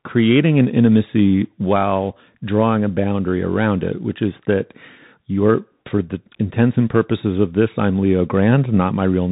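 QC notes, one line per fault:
throughout: Bluetooth CVSD headset codec. Nothing above 3.8 kHz comes through, so the speech sounds narrow. Each sample codes only a step up or down, and fast loud changes outrun it. S sounds turn scratchy over granular hiss. This fits a 64 kbps headset link.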